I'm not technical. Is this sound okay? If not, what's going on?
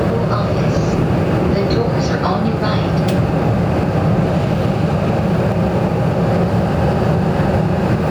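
No. Gain pumping runs through the whole recording: the level rises and falls, dipping each time a loud sound arrives and creeping back up in the quieter gaps. That's likely because the recording level was set far too high and an automatic level control kept pulling the volume down on every loud moment. The result is squashed audio where loud and quiet parts sit closer together, with a breathing swing in level.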